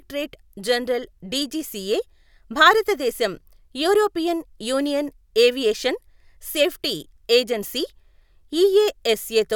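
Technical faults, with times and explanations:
No technical faults found in the speech; nothing to log.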